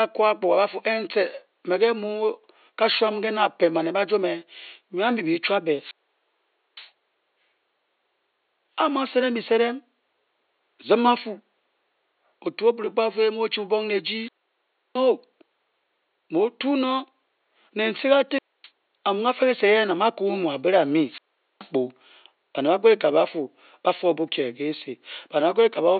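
The wireless link of an analogue FM microphone repeatedly fades until the receiver's squelch shuts the output, producing four wireless microphone squelch dropouts in this speech. Each is a brief surge of hiss, then a near-silent gap, then the speech returning: 5.77 to 6.91 s with about 0.86 s muted, 14.11 to 15.10 s just after "bubong ne" with about 0.67 s muted, 18.30 to 18.69 s with about 0.26 s muted, and 21.05 to 21.71 s with about 0.43 s muted.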